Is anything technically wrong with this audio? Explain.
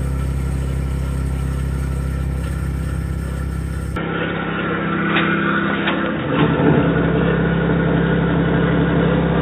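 Yes. From 3.96 s to the end, the sound likely comes from an input switched to a poorer device. There is no gap at the switch, and the level stays about the same. The band narrows abruptly, and nothing remains above 3.8 kHz. The top end goes missing, so the sound turns dull and boxy. The new device also adds its own faint background noise, sitting well below the signal.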